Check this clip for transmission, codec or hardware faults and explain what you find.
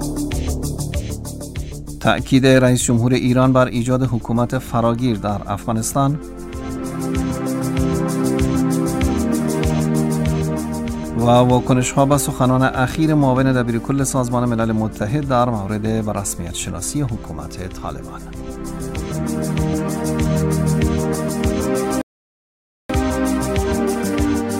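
One fault: a rebuffering stall at 22.01 s, lasting 0.88 s. Playback ran dry and paused. The waveform goes flat and the spectrogram blank, then the audio resumes exactly where it stopped.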